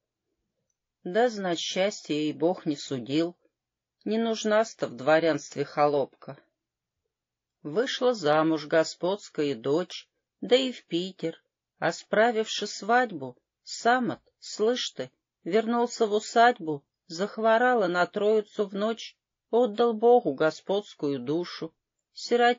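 MP3 compression runs throughout: a watery, swirling texture, dulled treble and flickering detail, most likely from heavy MP3 encoding at a low bitrate, plausibly around 32 kbps.

Pre-echo at 19.74 to 19.78 s: a short hiss, about 13 dB above the quiet before it, spreads 39 ms ahead of a sharp attack. This fits a long transform block that smeared its noise backwards.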